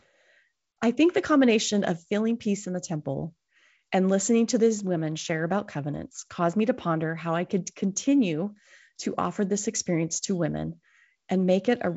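Nothing stood out on listening to this speech clip, which carries the usual sound of a G.722 wideband telephone path.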